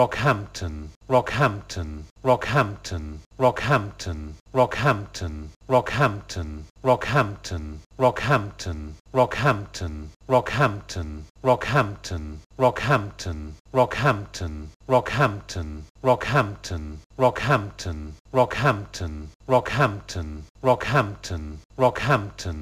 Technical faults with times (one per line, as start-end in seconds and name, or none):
none